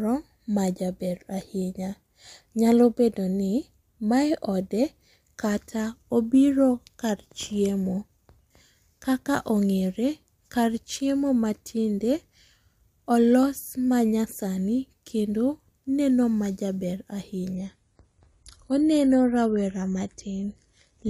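From 17.55 s to the end, the speech suddenly turns duller, with nothing above about 11.5 kHz and more codec artefacts, yet no gap. This is an adaptive stream at a lower bitrate, consistent with a drop from roughly 96 to 32 kbit/s AAC.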